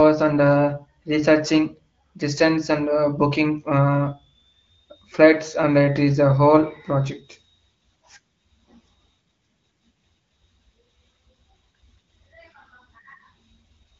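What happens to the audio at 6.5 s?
Nothing goes wrong at 6.5 s; the speech runs through that moment intact, carried as HD Voice wideband audio with nothing above about 7.4 kHz.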